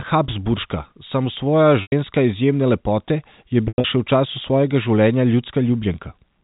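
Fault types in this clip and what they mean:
Packet loss with pitch repetition: stretches of the stream never arrived, and the receiver filled each gap by replaying the last pitch period and fading it out. At 1.82 s about 100 ms is missing, so the sound holds with a buzzy, frozen quality before dropping away. At 3.68 s about 140 ms goes missing in pieces across 160 ms, with the longest run about 100 ms, giving a stuttering hold-and-fade over the G.711 telephone band.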